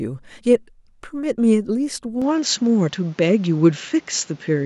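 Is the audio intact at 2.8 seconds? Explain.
No. From 2.22 s to the end, the speech suddenly loses everything above 7.6 kHz and gains a faint new background noise, with no gap and no level jump. This is likely an input switched to a poorer device; a plain filter would not bring new noise.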